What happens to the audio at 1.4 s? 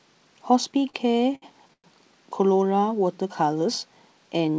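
Late packets kept emptying the jitter buffer, giving repeated stalls (stutter) from 0.72 to 1.86 s: nine gaps, up to 106 ms, filled by stretching the last sound.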